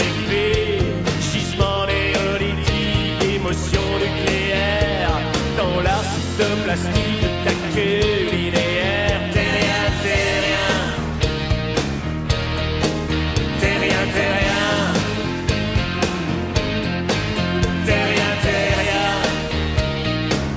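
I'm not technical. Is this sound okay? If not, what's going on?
Yes, nothing wrong here.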